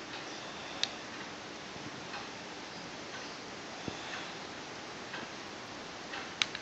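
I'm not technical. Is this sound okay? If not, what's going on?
No. Near the end, from about 5.14 to 6.19 seconds, there is a quick run of seven small ticks. These are CD scratch ticks. A scratch or mark on the disc spoils a bit of the recording each time the disc spins past it. The player can't fully repair that spot, so it patches over it, and each patch lasts only a few thousandths of a second. You hear this as a steady clicking, roughly six or seven times a second.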